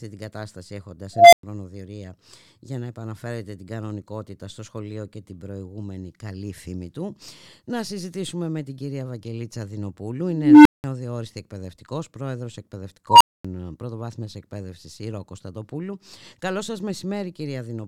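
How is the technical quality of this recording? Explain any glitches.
The speech is marred three times by an unstable filter. At 1.13 to 1.43 s, after "την κατάσταση έχοντας", a tone of around 700 Hz swells over 0.19 s, then drops to 0.11 s of silence. At 10.25 to 10.84 s a tone near 300 Hz builds over 0.41 s, with 0.19 s of silence. At 13.09 to 13.45 s, after "εκπαιδευτικός πρόεδρος", a tone around 1 kHz builds over 0.12 s, followed by 0.24 s of silence. Each time, a recursive filter's feedback runs away: a howl grows, clips, overflows and cuts out until the filter resets. On a waveform this is an expanding envelope flattening as it clips, then a flat gap. On a spectrogram it is a bright horizontal line that thickens, then a blank column.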